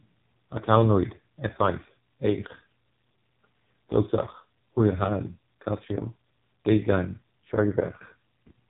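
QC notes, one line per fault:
throughout, AMR narrowband mobile codec: the speech ends abruptly at 3.8 kHz and sounds heavily buzzy and synthetic, because the codec rebuilds it from a vocal-tract model driven by a few pulses every 5 ms. Damage this heavy points to its lowest rate, around 4.75 kbps.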